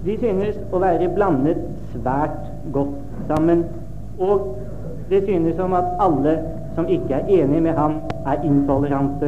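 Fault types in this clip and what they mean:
Loud pop: at 3.37–3.39 s and again at 8.10–8.13 s, a single sharp pop jumps roughly 10 dB above the surrounding sound while the audio carries on beneath it. Each is likely a brief voltage spike added to the signal and shaped by the circuitry after it.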